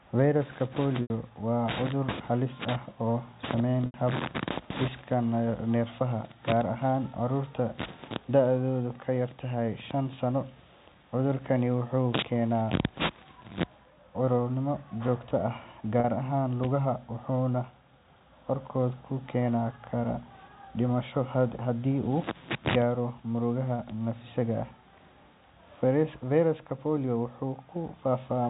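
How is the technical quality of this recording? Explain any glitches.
The main problem is three brief dropouts from packet loss with pitch repetition, heard over a telephone-band signal that stops at 4 kHz with only faint G.711 coding noise.

They land at 1.02 to 1.10 s and 3.86 to 3.94 s (80 ms each), and at 16.00 to 16.04 s (40 ms). Each time, data went missing and the receiver looped the last pitch period to cover the hole. On the 40 ms one you get a short, slightly buzzy held tone. The 80 ms gaps outlast the roughly 50 ms fade, so they drop toward silence before the speech cross-fades back. The lengths fit 20 ms packets.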